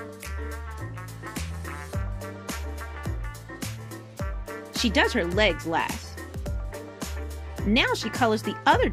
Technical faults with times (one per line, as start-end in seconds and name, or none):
none